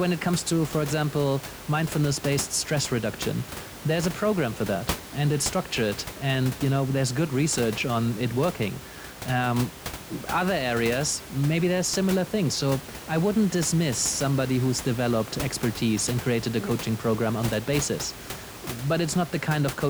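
Nothing stood out on listening to this speech; the room noise heard underneath sits about 13 dB below the talking and belongs to the recording itself.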